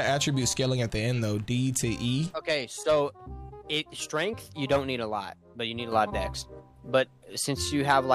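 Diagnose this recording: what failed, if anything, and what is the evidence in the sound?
A sudden gain jump at 5.92 s raises sound and background noise together by about 7 dB until the end, with no ramp. This points to a digital gain step, likely an unramped setting change in processing, rather than gradual automatic gain control.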